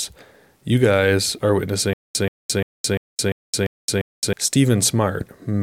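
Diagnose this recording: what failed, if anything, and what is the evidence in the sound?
Stutter with silent gaps after "you guys are", 1.93 to 4.33 s: a 130 ms burst repeats seven times, about 217 ms of silence between, likely a stalled playback buffer replaying.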